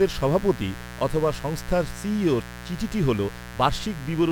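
From start to finish, a mains buzz runs under the speech. Something in the signal path is picking up sharp switching spikes from the 60 Hz supply, twice per mains cycle, so the interference carries a dense stack of 60 Hz harmonics climbing well into the kilohertz range. The result is a steady, raspy buzz rather than a smooth hum, sitting only about 15 dB below the speech the whole time.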